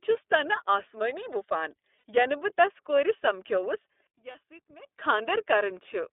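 Speech heard through the iLBC codec for its full length: the sound is confined to roughly 300 Hz to 3.6 kHz and has a slightly rough, synthetic edge, which fits the 13.33 kbps mode with 30 ms frames. On a spectrogram everything above 3.6 kHz is empty. At 1.98 s, lost iLBC frames leave about 60 ms, consistent with two missing frames, filled by a held, faintly buzzy repeat of the last pitch cycle that shows as smeared, evenly spaced harmonics before clean speech resumes. Another 30 ms gap at 4.31 s sounds the same. From 4.07 to 4.87 s the level falls by about 20 dB to a faint residue, likely one channel inverted so that the centred speech cancels in a mono sum. The waveform shrinks sharply across that span and the spectrogram fades.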